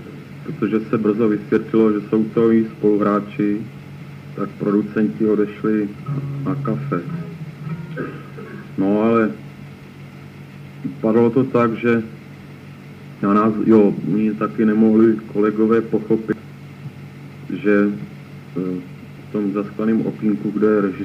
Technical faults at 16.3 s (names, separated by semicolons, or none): compressed frames skipped